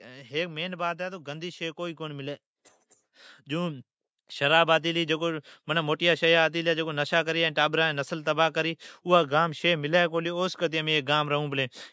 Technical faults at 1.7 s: automatic gain rising

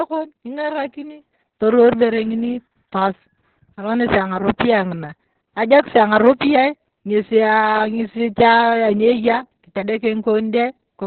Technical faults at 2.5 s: Opus voice compression

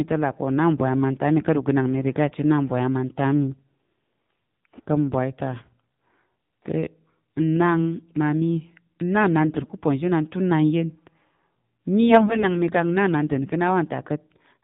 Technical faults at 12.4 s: AMR narrowband mobile codec; AMR bit errors

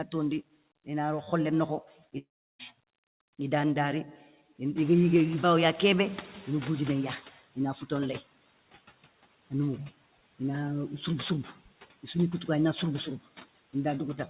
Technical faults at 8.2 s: none

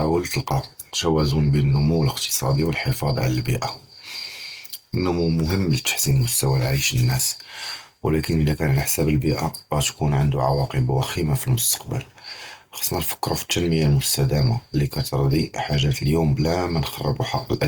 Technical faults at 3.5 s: Opus compression

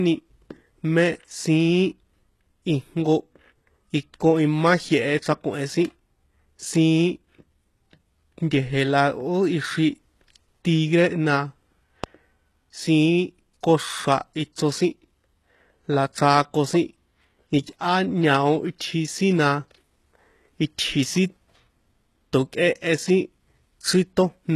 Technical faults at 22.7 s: HE-AAC compression

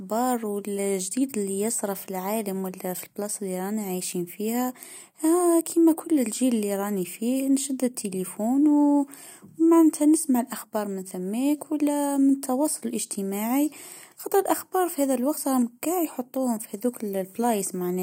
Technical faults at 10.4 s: none

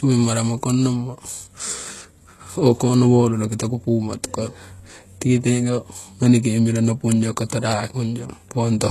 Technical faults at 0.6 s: HE-AAC compression

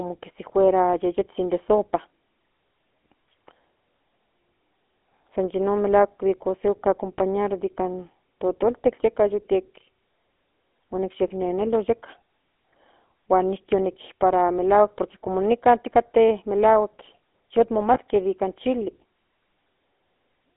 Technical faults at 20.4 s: GSM full-rate codec

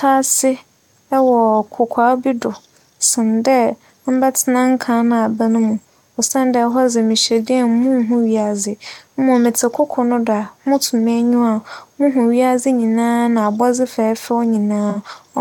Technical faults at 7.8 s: none

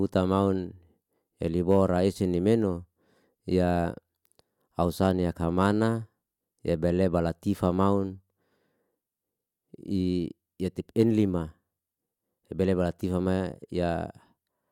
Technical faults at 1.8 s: hard clipping

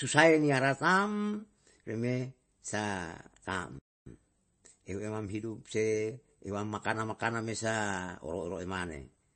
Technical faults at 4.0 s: MP3 compression; playback stall; time-compressed catch-up

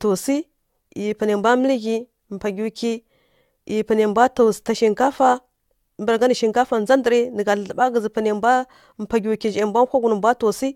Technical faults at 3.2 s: generation loss

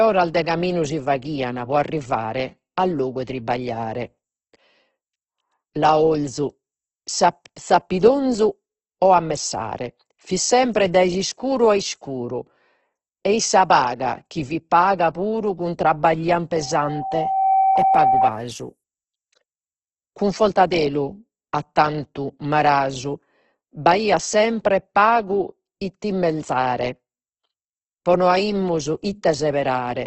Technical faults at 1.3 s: Opus compression

